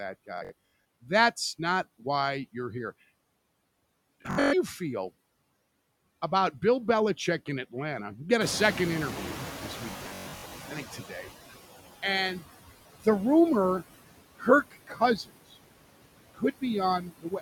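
Right from the start there are noise suppressor artifacts running through the whole speech clip. The suppressor pulls the steady background down by about 19 dB, working band by band on each frame, so the noise floor sinks in the gaps and comes back up under the talking.

The first Bluetooth stutter hits at 0.38 to 0.71 s. Packets went missing or arrived late, so the receiver kept replaying its last short slice of audio until fresh data showed up. That comes across as a buzzy, machine-gun repeat. About 213 ms goes missing in bits spread over roughly half a second, with the longest gap 64 ms, and then playback jumps ahead as though it never paused. It happens again at 4.22 to 4.54 s, where about 235 ms is lost and the longest run is 128 ms.

Around 8.5 s the room noise itself steps up by about 17 dB. That's just the real background getting louder. The trouble is that the suppressor's noise estimate lags, so from 8.4 to 11.27 s you hear the noise suppressor catching up. 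At first the louder noise comes through with less reduction, and then it gradually sinks over nearly 2.9 s until the cut settles at about 13 dB.

Partway through that, at 9.92 to 10.53 s, there's a third stutter and the longest one. About 363 ms is lost across 0.6 s, and the longest run is again 128 ms.

Toward the end the suppressor starts treating bits of the speech as noise and turning them down with the background, so you get speech cut by the noise suppressor. The first is a short dip at 10.96 to 11.29 s of about 10 dB. After that come deeper ones at 14.36 to 15.01 s (about 20 dB), 15.17 to 15.31 s (about 18 dB), 16.34 to 16.63 s (about 21 dB), and from 17.0 s to the end (about 16 dB). In each of these, the affected speech sounds swallowed or faint.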